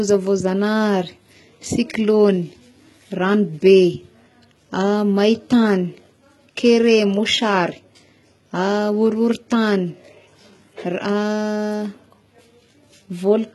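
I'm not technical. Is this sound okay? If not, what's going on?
No. The speech was likely squeezed hard with HE-AAC compression, which stores only the lower frequencies and fakes the treble by copying them upward. Throughout, nothing sounds above about 11.8 kHz, and s sounds come out gritty, metallic or lispy.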